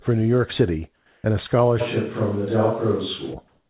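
A speech recording heard through a call path that carries nothing above 4 kHz, which fits a narrowband codec such as G.711. From 0.96 to 1.24 s, just before "and a", the background flattens into a steady, featureless hiss about 5 dB quieter, and again from 3.48 s to the end, about 4 dB louder. This is likely comfort noise in place of the background, filling pauses while the sender stopped transmitting. From 1.82 to 3.33 s, starting after "and a", the voice turns suddenly roomy and hollow at roughly the same level, with room noise around 30 dB below the speech, likely a switch to a distant microphone.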